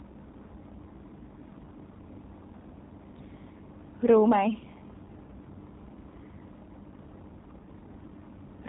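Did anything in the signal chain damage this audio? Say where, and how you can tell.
Yes, at the codec stage: the speech went through G.729 coding, audible across the whole clip. Nothing survives above 4 kHz, and the voice is rebuilt from a vocal-tract filter, pitch predictor and sparse pulses. That leaves it plainly rough and synthetic, which fits an 8 kbit/s G.729A link.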